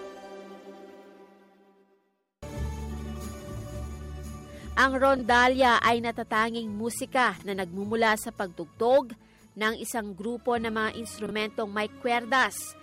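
Frames out of order occur three times, at 5.17 to 5.22 s, 7.37 to 7.42 s and 11.26 to 11.31 s. Each time, two adjacent frames, each about 24 ms long (which fits a 24 ms frame size), were delivered and decoded in swapped order, so each 50 ms stretch plays its two halves reversed. Nothing is lost, but each swap is heard as a brief garbled flutter.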